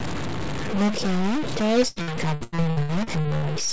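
From start to finish the speech carries a distortion, and the pauses fill with noise rather than going quiet. That points to a stuck bit, likely one converter bit held at a fixed value. Unlike clipping, it doesn't depend on loudness, and it persists through the silences. From 1.88 s to 3.45 s, repeated packet loss (robotic sound) takes over. A run of short holes, the longest about 89 ms, is patched by stretching the last sound, so roughly a third of that span becomes choppy filler. Above the G.722 call path's 8 kHz ceiling there is no content. The holes return in quick succession, which sets this apart from a single isolated dropout.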